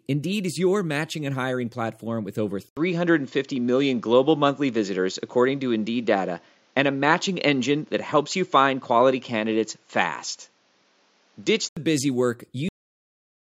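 At 2.69 s the speech drops out for 80 ms and returns duller, with nothing above 7.3 kHz, a level shift of around 5 dB and a new noise floor roughly 40 dB down. This is likely an input switched to a poorer device. Unlike a simple filter or gain change, the tone, level and background noise all change together until 11.77 s.

At 12.69 s the clip ends with a cut-off end: the speech stops mid-sound and falls straight to digital silence with no decay, because the final buffers never made it out. A deliberate fade or natural pause would taper, not snap off.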